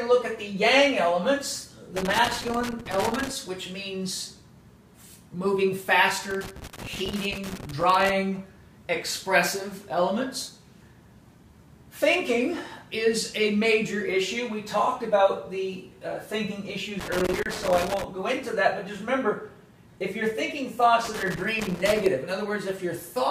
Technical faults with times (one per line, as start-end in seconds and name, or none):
1.96-3.30 loose connector crackle
6.31-8.10 loose connector crackle
17.00-18.04 loose connector crackle
21.05-22.06 loose connector crackle